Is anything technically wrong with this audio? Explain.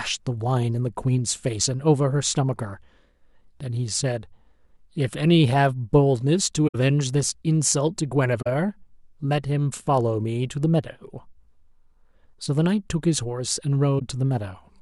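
Yes, there's a corrupt frame concealed problem in three spots in this speech: 6.67 to 6.75 s, 8.41 to 8.47 s, and 13.99 to 14.02 s. Bit errors hit the AAC stream, the decoder caught them and patched over the damage instead of playing garbage. The concealed stretches last 80, 57 and 34 ms, which fits roughly three, two and one frame.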